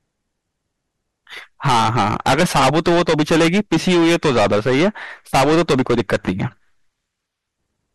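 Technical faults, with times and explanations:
Throughout: hard clipping. The speech is driven about 22 dB past what the signal path can carry, so roughly 15% of all samples were flattened at the limit. Every loud syllable turns to harsh fuzz. The waveform shows squared-off plateaus, and the spectrogram shows dense harmonics smeared up to the top.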